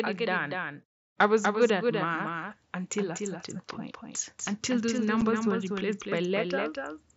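A speech recording carried over an mSBC Bluetooth headset link, whose wideband sound stays limited to 8 kHz, runs with a doubled audio track from start to end. A full-band copy about 5 dB quieter trails by roughly a fifth of a second, most likely from the signal being captured twice or an edit left out of step. Unlike room echo, it has no decay or reverberant colour. At 5.21 s there is unconcealed Bluetooth headset packet loss: a single 7.5 ms hole with hard edges. Because there is only one isolated gap, it lacks the rough crackle of scattered losses.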